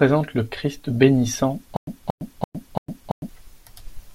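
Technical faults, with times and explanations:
1.77–3.29 s, stutter with silent gaps: one 230 ms fragment of speech plays four times, each followed by 107 ms of digital silence, so the burst recurs every 337 ms at a mechanical, even pace. The likely cause is a stalled player or stream replaying its last chunk at each retry before running dry, so the speech meant for this span is lost. The waveform shows identical blocks separated by flat silent gaps. The spectrogram shows repeated copies of the same pattern divided by blank vertical bands.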